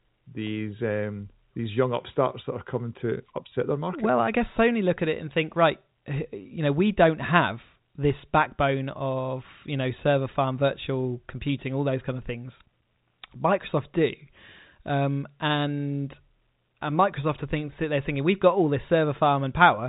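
No technical faults can be heard in this speech.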